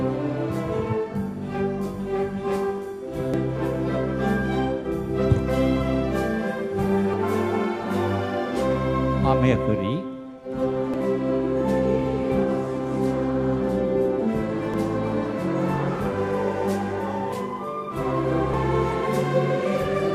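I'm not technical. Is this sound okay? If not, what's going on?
No. The sound jumps ahead at 3.34, 7.14, 10.94, 14.74 and 18.54 seconds, each time skipping about a fifth of a second. This is audio missing between chunks, likely from a recorder working in four-second pieces and dropping a bit at each handover.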